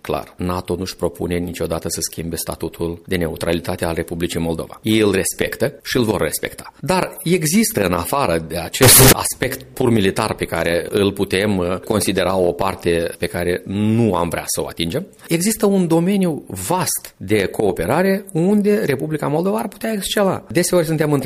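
From 8.82 to 9.12 s the audio turns abruptly into a very loud, harsh, buzzing blast lasting about 0.3 s. Quiet background sound jumps to the same level as the main sound, though the pitch can still be followed. This is float read as integer: the 32-bit float samples were likely read as 32-bit integers, so each value's sign and exponent bits set the level, squaring the waveform off at an almost fixed, high level regardless of the original loudness.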